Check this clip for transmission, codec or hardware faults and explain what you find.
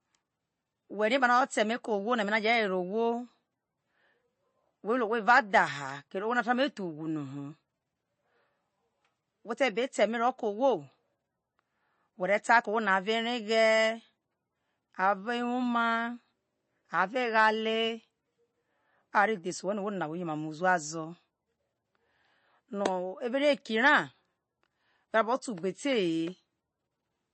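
There is one fault, and it runs through the whole clip: plainly audible MP3 compression, likely from an encoder starved of bits at a low bitrate near 30 kbps. To fit that budget, the encoder has cut everything above 8.3 kHz and dropped weak frequency lines, which flicker in and out between frames. The speech sounds watery and swirly, with metallic chirps on s sounds and smeared consonant onsets. A spectrogram would show a hard ceiling at 8.3 kHz and patchy, blocky gaps below it.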